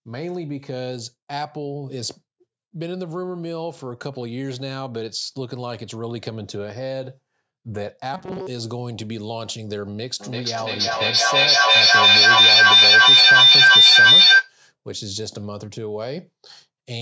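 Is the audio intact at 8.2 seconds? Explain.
No, 8.2 s sits inside a stretch of robotic sound from repeated short buffers, 8.14 to 8.47 s, likely from replaying a roughly 5 ms chunk, giving a metallic 188 Hz buzz over about 70% of that stretch.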